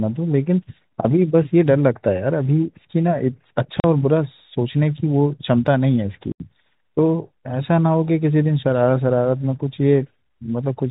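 At 3.80 to 3.84 s and again at 6.32 to 6.40 s, the speech drops into dead silence with hard edges. That's packet loss filled with silence. Gaps of 40 ms and 80 ms fit 20 ms packets going missing, over a telephone-band G.711 line.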